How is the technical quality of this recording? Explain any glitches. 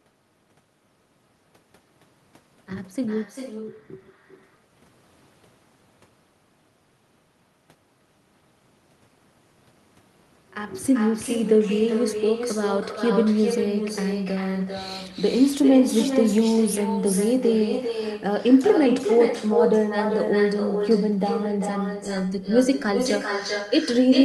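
The recording is marred by an echo with no canceller, present from start to finish. Throughout the speech, every phrase returns roughly 400 ms later as a weaker copy, about 7 dB below the direct sound. A far-end loudspeaker is feeding its own microphone with nothing cancelling that path, so the speech makes the network round trip and comes back thinner. On a waveform, each burst gets a smaller trailing twin. A spectrogram shows weaker duplicate harmonics offset along the time axis.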